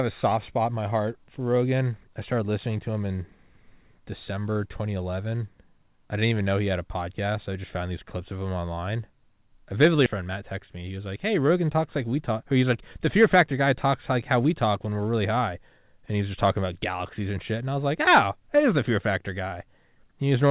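At 10.06 to 10.08 s a skip ahead occurs. Roughly 0.7 s of speech is gone, probably dropped when the jitter buffer overflowed with newer audio queued. Playback jumps straight across with no silence or filler. Unlike a dropout, there is no silent gap, and the two sides meet almost seamlessly.

From 10.21 to 11.12 s a jitter buffer speed-up follows. Still holding surplus audio, the buffer trims repeated slivers of a pitch period or so, about a tenth of a second in total. Speech runs at 109% with its pitch unchanged, unlike a resampling error, which would raise the pitch. Throughout, the narrowband G.711 call path passes nothing above 4 kHz.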